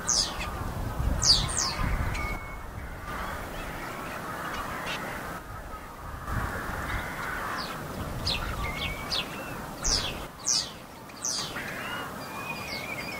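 At 2.36 to 3.08 s, 5.38 to 6.27 s and 10.27 to 11.38 s the level drops abruptly by about 6 dB and then snaps back. This is most likely one channel dropping out: with one stereo side gone, the mono sum keeps only half of the shared material, and anything carried by that side alone disappears. Unlike a gain dip or fade, each step is instant, with no ramp, and the lost content returns intact when the channel comes back.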